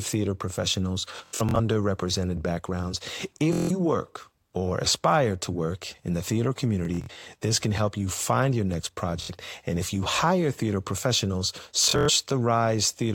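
A buzzing, machine-gun repetition breaks the speech at 1.16–1.60 s, 3.53–3.71 s (just before "work or aspire to"), 6.85–7.24 s, 9.22–9.31 s (after "you find your next") and 11.84–12.09 s (after "you hire theater professionals"). This is Bluetooth stutter. Packets arrived late or were lost, and the receiver kept replaying its last short slice, which fits packets of about 23 ms. The speech then resumes further on, as if it had kept playing.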